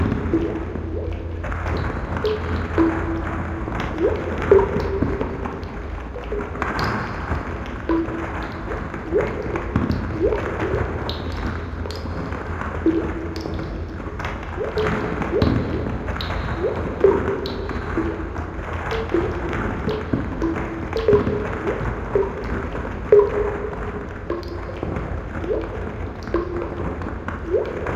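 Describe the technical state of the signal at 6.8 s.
The audio is intact at 6.8 s, with no technical fault to be heard at that moment.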